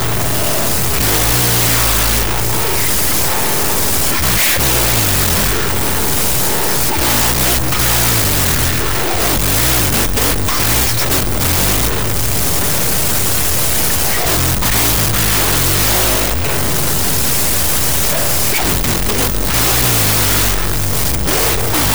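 From the start to the end, a wrong sample width fault: float samples read as 16-bit integers. That yields harsh broadband noise with speech buried underneath at half speed and lowered pitch, unlike a simple sample-rate error, which slows audio without burying it in noise.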